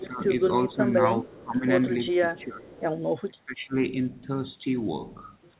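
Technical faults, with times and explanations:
0.00–0.23, 0.68–0.78, 1.24–1.65, 2.11–2.73 and 3.27–3.75 s, speech suppressed in double talk: the talker's level sags while the far side is also talking, by about 10 dB early on and up to about 25 dB in the last stretch. This is likely the echo canceller clamping down because it couldn't separate the talker from the loudspeaker echo.
0.49–0.67, 1.30–1.35 and 2.36–2.81 s, echo leak: a faint copy of the voice comes back 415 ms late, about 25 to 30 dB under the speech. The far end's canceller likely didn't fully remove its loudspeaker pickup, and the leaked copy is limited to 4 kHz like the rest of the call.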